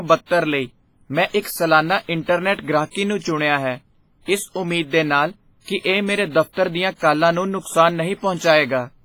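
Across the whole speech recording there is heavy transform-codec damage, most likely WMA compression at a low bitrate, which fits roughly 24 kbps. Quantisation noise is smeared over tens of milliseconds around each onset, so the speech sounds ringing and washy, with a hiss that swells and fades with the signal. On a spectrogram, weak partials drop out as blank gaps between surviving bands, with nothing above 21.4 kHz, and the waveform shows pre-echo fuzz ahead of transients.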